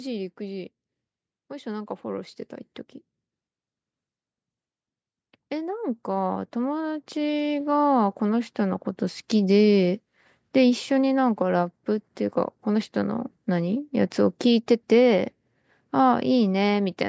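From 5.48 s to 8.87 s the automatic gain rising fault appears: the gain control judges the speech too quiet and lifts its gain by about 7 dB over roughly three seconds, so voice and background noise swell together, within a band that stops at 8 kHz.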